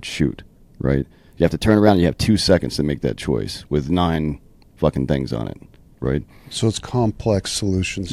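A speech clip where the pace and pitch jump up together from 1.42 to 2.26 s, about 6% faster and a semitone sharp, snapping back before "seconds to make that". After "things on it right", it drops about 6% slower and a semitone flat from 6.47 to 8.00 s. Those are drift correction steps, likely a clock-matching resampler changing rate abruptly to manage its buffer.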